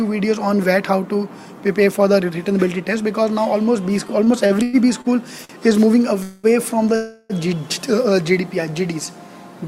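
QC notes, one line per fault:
4.07–5.08 s, repeated stalls (stutter): six gaps, the longest 107 ms, filling 211 ms as packets arrived late and the jitter buffer kept emptying, so the audio drags and stutters.
5.45–5.61 s, short stall from a late packet: a packet missed its slot, so the receiver stretched the last sound for 48 ms, giving a held sound with a slight buzz or dip before continuing.
6.23–6.47 s and 6.96–7.33 s, call audio freeze: the last sound hangs as a fading buzz or hiss for 210 ms and then 340 ms, never reaching silence, then resumes where it stopped. The likely cause is packets held up in transit, emptying the jitter buffer.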